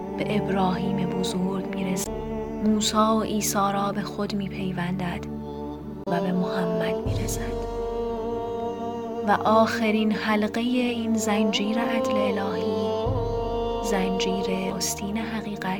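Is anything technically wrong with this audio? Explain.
Yes. There is damaged data in the compressed stream at three points: 2.03 to 2.07 s, 6.04 to 6.08 s, and 14.70 s. Each is very brief, about 40 ms for the first two and shorter for the last. Part of the encoded data there is corrupt. The decoder misreads those frames, loses sync, and hunts for the next valid frame header. The result is a short chirp or blip that cuts across the audio.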